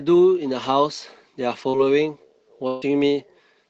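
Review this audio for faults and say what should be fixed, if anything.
Short concealed packet loss appears at 1.69 to 1.86 s. About 40 ms of the speech never reached the decoder in time. The receiver covered the hole with about 38 ms of synthetic sound, extending what came just before it. It then blended back into the real signal. The result is a brief smear in the speech. The patch also adds a small timing slip, roughly 20 ms. A larger jitter buffer or forward error correction would prevent this.

A burst of packet loss follows at 2.67 to 2.84 s. About 140 ms went missing in one run. The receiver kept extending the last sound for about 143 ms and let it fade as the gap lengthened. There is no silent stretch, so the gap is heard as a held, fading tail instead of a dropout. Speech then resumes further on, with the part in between lost. Stronger redundancy, such as interleaved or redundant packets on the link, would prevent this.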